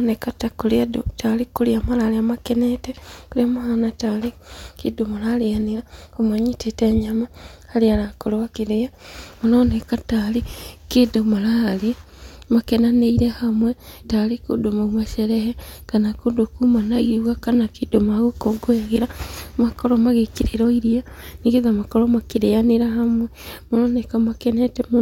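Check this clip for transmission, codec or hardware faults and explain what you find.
No faults found here.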